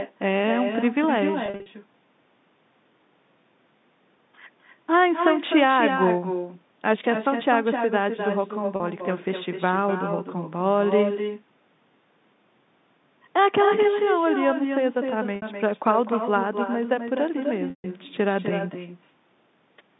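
From start to finish, echo with no canceller shadows the speech. The far end plays the call through a loudspeaker. Its microphone picks that sound up again, and nothing removes it. So every phrase returns after about a third of a second, roughly 6 dB quieter. The copy sounds thinner than the original. It rides the same narrow telephone band as the main signal.

Packet loss with pitch repetition appears four times. From 1.46 to 1.66 s, 140 ms goes missing in short runs of up to 40 ms, scattered across 200 ms. Each gap is bridged by repeating the last pitch period. This gives a stuttering, buzzy hold. At 8.76 to 8.80 s, a 40 ms loss sounds like a brief held buzz. At 15.36 to 15.42 s, 60 ms does the same. At 17.70 to 17.84 s, 140 ms is lost. The repeated cycle fades toward silence before the sound cross-fades back.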